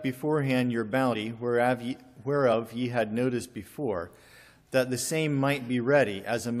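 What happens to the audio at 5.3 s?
Nothing goes wrong at 5.3 s; the audio there plays through cleanly, with no dropout, click, glitch or other audible fault.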